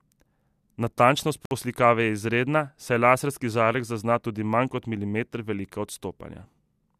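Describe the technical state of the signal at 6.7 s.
At 6.7 s the speech signal is intact, with no dropout, clipping, glitch or other fault.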